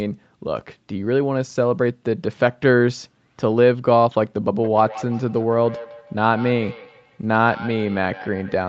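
From 4.55 s to the end of the speech, a feedback echo between two devices appears. Each phrase returns at a spacing of roughly 150 ms, thinner and more ringing with each pass, peaking about 17 dB below the direct speech. A second device in the room is playing the call back into a microphone, and that microphone's echo canceller cannot remove sound it did not play itself. The repeats share the direct signal's 8 kHz bandwidth limit.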